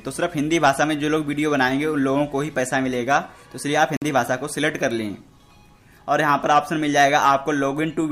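At 3.97 s the sound cuts out and stays silent until 4.02 s, a gap of about 53 ms. When it returns, it picks up further along rather than where it stopped, as though playback had carried on underneath the silence. This pattern is consistent with a Bluetooth dropout, likely caused by audio packets failing to reach the headphones in time and being discarded. A hole of this length fits the loss of a handful of consecutive packets.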